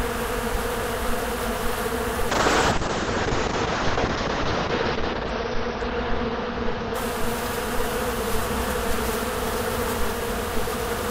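From 2.3 s to 9.75 s the sound turns rough and muffled, losing everything above 6 kHz: a call bitrate drop, consistent with a fall from 96 to 7 kbps.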